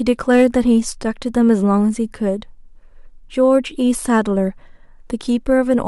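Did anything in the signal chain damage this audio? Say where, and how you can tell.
Yes: hard clipping from about 0.31 to 0.45 s, where peaks overdrive the converter by about 3 dB and flatten, adding harsh high harmonics heard as crackle.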